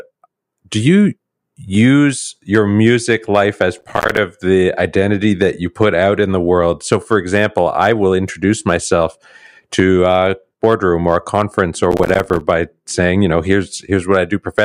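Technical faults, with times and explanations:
3.79–4.18 s and 11.92–12.41 s, processor overload crackle: each burst is a short stretch of gritty, tearing crackle over the speech, about 0.4 s and 0.5 s long. The processor fell behind and missed a few dozen buffer deadlines in quick succession. Each miss dropped in a tiny stretch of silence with hard edges. The spacing fits buffers of roughly 5 ms, and the dropouts packed this closely merge into crackle until the load eases.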